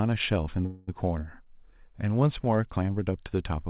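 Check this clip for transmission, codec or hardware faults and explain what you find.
One transmission fault is audible in this speech: a call audio freeze from 0.66 to 0.90 s. For about 215 ms the last sound is stretched into a fading buzz or hiss, then the audio resumes exactly where it stopped with nothing lost, which points to a likely jitter buffer underrun while packets were delayed. The narrowband sound, with nothing above 4 kHz, fits a G.711 A-law call path.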